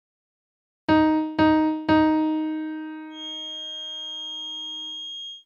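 From 3.09 s to the end, a feedback whistle sits behind the sound. It is a thin, steady tone near 3.2 kHz, roughly 15 dB below the main sound. It swells and fades slowly in level. The likely cause is a speaker-to-microphone loop held just at the edge of feedback.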